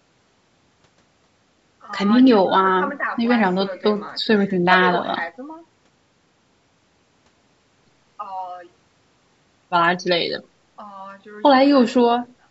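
Nothing technically wrong turns up in this speech clip; it has simply gone through a call's microphone processing, which trims the lowest bass, and that's just how such a path normally sounds.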